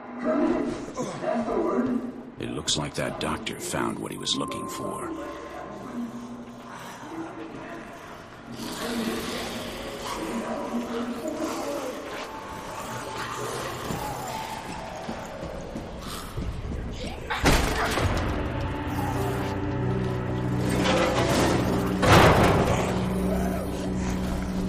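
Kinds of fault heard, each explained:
No faults can be heard anywhere in the audio.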